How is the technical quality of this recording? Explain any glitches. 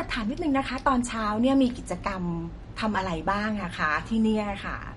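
The recording carries plainly audible lossy-coding damage from start to finish, most likely MP3 compression at a low bitrate, in the region of 47 kbps. Nothing reaches above 11.2 kHz, because the encoder, short of bits, discards the top band at a fixed cutoff. It also drops quieter spectral detail that then flickers between frames, so the speech sounds dull and watery, with sibilants and consonant onsets less crisp than they should be.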